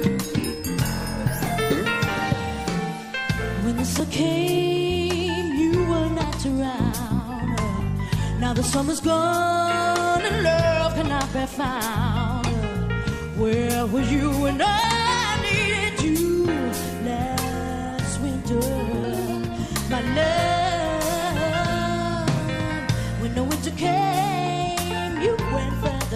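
Small forward jumps in the sound occur at 4.0, 6.24, 7.8, 14.84, 16.48 and 19.04 s, each skipping roughly a tenth of a second or less. These are likely dropped buffers (overrun): unread samples were overwritten, and the surrounding audio was spliced together without a gap.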